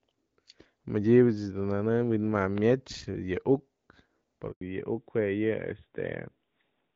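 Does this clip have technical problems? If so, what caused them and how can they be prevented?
Yes. A loud pop: a voltage pulse, likely from a plug, switch or static discharge, puts two sharp pops, about 10 dB above the speech, between 2.58 and 2.73 s, just after "dun nëne'ëm". Secure connectors and grounding, and avoid switching equipment during recording.

A handover gap: the call switched networks and no speech frames arrived, so the audio cuts out for 100 ms from 4.51 to 4.61 s. Holding a stable connection, or disabling network switching mid-call, prevents this.

A fallback to narrowband: right after that handover the call dropped from HD Voice, which fits AMR-WB at 12.65 kbit/s, to an older codec, which fits AMR-NB at 12.2 kbit/s. From 4.61 s to the end nothing above 4 kHz remains, so the speech sounds duller and rougher. Keeping both ends on networks that support HD Voice avoids the drop.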